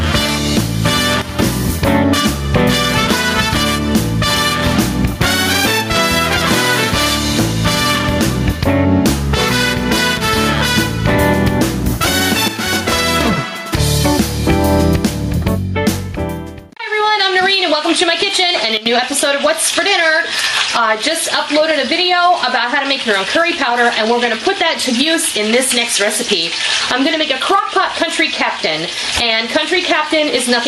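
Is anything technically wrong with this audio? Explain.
Yes, there are two kinds of gain fault.

Gain pumping runs through the whole clip, with the level swinging by around 15 dB. Loud and quiet passages sit unnaturally close together and the sound is squashed. The likely cause is input gain set far too high for the microphone, with a fast limiter or compressor clamping down on every peak.

Sudden gain jumps occur three times: 1.22 to 1.39 s, dropping about 13 dB; 12.48 to 13.21 s, dropping about 10 dB; and 18.77 to 18.86 s, dropping about 14 dB. Each time, the sound and the background noise fall together in a single step and then come back, with no fade. This likely comes from a digital gain change applied from one sample to the next without a ramp, such as a setting update or bit shift.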